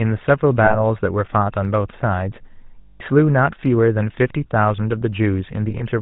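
The whole clip carries GSM full-rate codec damage: band-limited below 4 kHz, with buzzy, gravelly speech typical of a 13 kbps pulse-excited coder. Lost GSM frames at 0.64 s (60 ms), 2.82 s (180 ms) and 5.70 s (60 ms scattered over 100 ms) are patched by repeating the last good frame, giving a rough, metallic ring.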